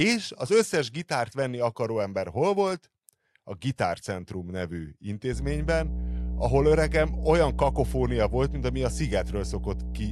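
A ground loop or nearby transformer couples the power line into the signal from 5.33 s to the end, laying a loud, steady 60 Hz mains hum almost level with the speech.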